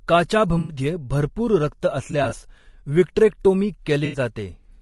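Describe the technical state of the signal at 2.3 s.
At 2.3 s the signal sits at the tail of an AAC frame loss with concealment running from 2.11 to 2.33 s, just after "भरपूर रक्त". About 60 ms of coded audio went missing in short gaps of around 20 ms scattered across that 200 ms stretch. The decoder patched each gap from the last good spectrum, so the speech turns briefly smeared and noisy, with a phasey flutter rather than a clean dropout.

Underneath, and throughout the clip, the speech carries the plainly audible damage of low-delay AAC compression, likely AAC-ELD at a rate that fits about 32 kbps. Its short frames resolve pitch harmonics poorly, so the voice sounds rough and grainy, with noise filling the spaces between harmonics and a thin, synthetic-sounding top band.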